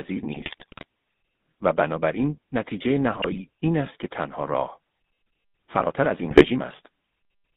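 Throughout, the speech has a buzzy, gravelly roughness and a narrow band of about 150 Hz to 3.7 kHz, the mark of the GSM full-rate codec. It rebuilds the voice from a vocal-tract filter driven by sparse, regularly spaced pulses, which fits a 13 kbps stream.

From 0.32 to 0.84 s, 3.06 to 3.41 s and 6.28 to 6.46 s, the voice breaks into squawks, pops and gargling. These are GSM bit errors: corrupted filter, pitch or gain values warp the spectrum or spike the level frame by frame.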